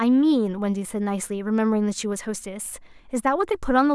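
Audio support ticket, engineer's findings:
No faults found on listening to the speech clip. Nothing to escalate on this ticket.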